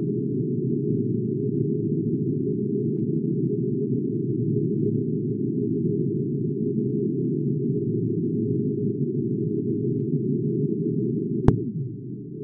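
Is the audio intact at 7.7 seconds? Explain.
No. From 7.69 to 7.72 s the audio has compressed frames skipped. The decoder never receives or rejects whole coded frames, so playback leaps forward by roughly 300 ms, which fits about seven frames of 46.4 ms each. The join is heard as an abrupt jump ahead in the sound. On a spectrogram it appears as a sudden mismatch in texture; the waveform shows a brief jump.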